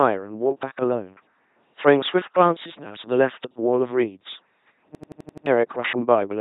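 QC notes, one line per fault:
Throughout: LPC-10 vocoder. The speech is rebuilt by a low-order vocal tract filter driven by either a pulse train or noise at 2.4 kbit/s, so it comes out as a heavily damaged, buzzing robotic voice, with nothing above 3.9 kHz surviving the codec.
4.95–5.46 s: system hang loop. The system froze while the sound hardware kept replaying its ring buffer, so an 85.33 ms slice repeats six times at 11.7 Hz, a machine-gun stutter that fits a 2048-sample buffer, replacing about half a second of audio.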